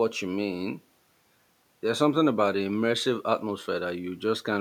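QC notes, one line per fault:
No faults found, so there is nothing to log in these QC notes.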